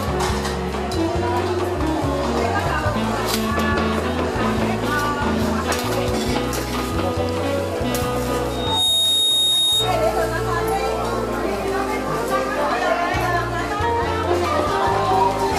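Around 8.50 to 10.00 s there's loudspeaker feedback squeal: a mic-to-speaker loop runs away at 3.7 kHz, swelling within a fraction of a second to a few dB above the audio.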